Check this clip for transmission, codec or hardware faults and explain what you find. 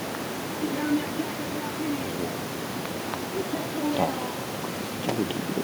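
One fault is present, running through the whole clip. Echo with no canceller: the far end is replaying the speech over a loudspeaker, its microphone recaptures it, and nothing subtracts it, so every phrase returns after roughly a fifth of a second as a faint, thin copy about 25 dB below the direct speech.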